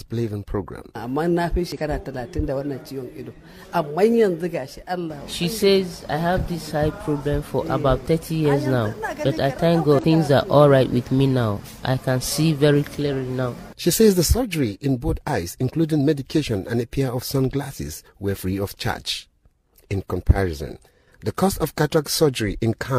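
Damaged data in the compressed stream makes the decoder lose frame sync at 1.72–1.78, 7.66–7.69 and 9.99–10.05 s, producing brief glitches that appear as abrupt waveform breaks.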